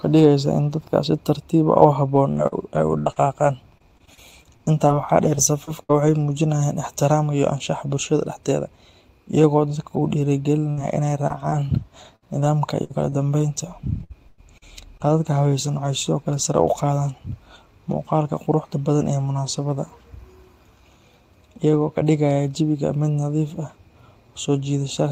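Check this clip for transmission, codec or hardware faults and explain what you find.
The clip has transmission faults from packet loss on the network path: two long choppy stretches, one short burst dropout, a couple of brief concealed gaps, and a few frames rebuilt from error correction.

Repeated packet loss (robotic sound) runs from 2.15 to 6.09 s, just before "muujinayaan ixtiraamka iyo anshaxa", and again from 12.16 to 16.55 s, ending before "u qaadaan". The first stretch has 14 gaps and the second has 7, with the longest at 81 ms and 101 ms. Each hole gets patched by extending the previous sound, so the speech turns choppy, with bits missing.

A burst of packet loss at 10.71–10.79 s drops about 60 ms in one go. The receiver carries the last sound forward and fades it, so you hear a short held buzz or hiss. Then the speech jumps ahead, and the audio from that gap is gone.

Short concealed packet loss hits at 11.27–11.32 s and 11.50–11.54 s, roughly 20 ms each. 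The decoder fills these tiny holes from the preceding pitch or shaped noise and then blends back into the real audio. Each one comes across as a quick smear or wobble.

Lost packets rebuilt from error correction show up at 10.77, 11.30 and 11.52 s, 20 ms each. In each case the following packet carried a low-bitrate copy, so nothing goes silent. Those frames just sound rougher and noisier for an instant.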